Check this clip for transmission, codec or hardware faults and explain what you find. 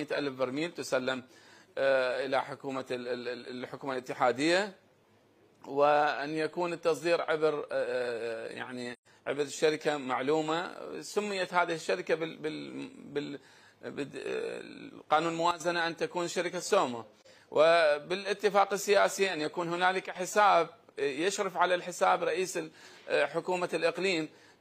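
Yes, there are two kinds of fault here, each showing up twice.

AAC frame loss with muting appears at 8.93 to 9.07 s and again at 17.20 to 17.27 s. The first gap runs about 128 ms, which fits three consecutive lost frames. The second is about 43 ms, roughly one frame. The decoder had nothing for those frames and zeroed their spectrum, so the overlapping windows fade the sound down and back up. You hear a soft-edged hole at the first and a brief dip at the second rather than hard cuts.

A sudden gain jump hits at 15.51 to 15.60 s, where the level drops by about 12 dB, and again at 20.06 to 20.16 s, with a drop of about 10 dB. The sound and the background noise step down together in one instant rather than sliding. That points to a digital gain change between adjacent samples, most likely a setting or bit shift applied with no ramp.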